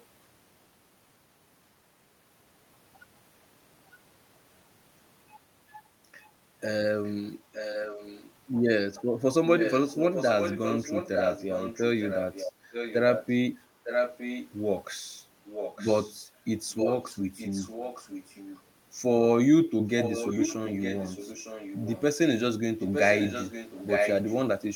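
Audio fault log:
6.2–8.31 s, 9.57–14.5 s, 15.45–18.62 s and 19.98 s to the end: echo leak. A second copy of the speech trails the original by 0.91 s, about 10 dB down in the first and third stretches and only about 5 dB down in the others. This is likely loudspeaker pickup at the far end that its echo canceller failed to remove and sent back.
12.52–12.7 s: background gated by the echo canceller. For about a fifth of a second, during the echo stretch, the room sound dips by up to about 6 dB and then recovers. The canceller briefly pulled the microphone down while the loudspeaker was playing, then released it.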